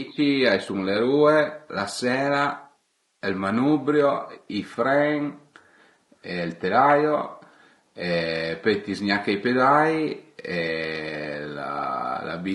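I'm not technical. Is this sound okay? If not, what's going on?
No. The speech sounds rough and grainy from start to finish. There is a hiss tucked between the tones of the voice. The highest, brightest sounds seem thin and artificial. This is low-delay AAC compression, the kind video calls use to keep the sound quick. It likely squeezed the audio hard. It slices sound into very short pieces, and here it couldn't capture the voice's tones cleanly, so detail was lost.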